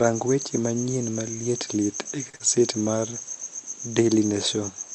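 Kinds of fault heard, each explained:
Short stall from a late packet: a packet arrived behind schedule and the jitter buffer ran dry, so the receiver held the last sound for about 42 ms from 2.29 s until it came, then resumed where it left off. The sound is stretched rather than lost, and the delay grows by about 42 ms.
Short concealed packet loss: right after the stall, about 40 ms of audio from 2.36 to 2.42 s never reached the decoder. The receiver filled the gap by extending the preceding sound, then blended back into the real signal, which leaves a brief smear where that audio is missing.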